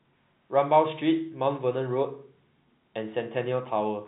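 No technical faults can be heard in this speech.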